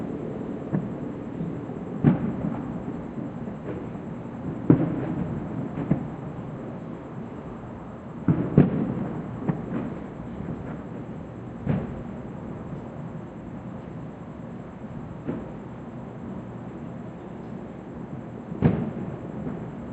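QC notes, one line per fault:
No fault found.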